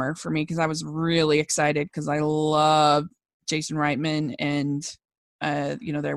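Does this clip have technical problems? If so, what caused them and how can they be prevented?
Yes. A gap at a join of encoded pieces cuts the speech from 5.05 to 5.08 s, a silence of about 30 ms with smeared edges. Separately encoded segments, about 6 s long, kept their encoder start delay and final-frame padding. To prevent it, trim encoder delay and padding at each join, or encode the audio as one continuous stream.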